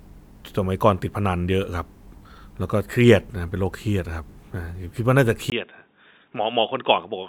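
At 5.5 s the input likely switched to a poorer device: after a 20 ms gap, speech turns dull, cut above 3.8 kHz, about 10 dB quieter.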